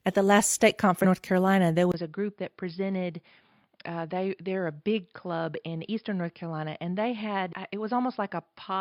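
At 1.00 to 1.06 s, damaged data in the compressed stream makes the decoder misread frames and lose sync until it finds the next header, so the speech briefly breaks up. At 1.92 s the input was likely switched to a poorer device: after a 20 ms gap the sound turns dull and boxy, with nothing above 5.2 kHz, drops roughly 10 dB, and carries a faint new background noise well below the voice. At 7.49 to 7.53 s, a second stretch of corrupted stream data produces another short break.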